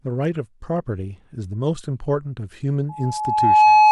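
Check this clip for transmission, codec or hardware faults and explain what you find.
There's one fault, loudspeaker feedback squeal, from 2.89 s to the end. The mic hears its own speaker, and an 851 Hz tone swells over roughly 0.7 s until it sits around 15 dB above the speech.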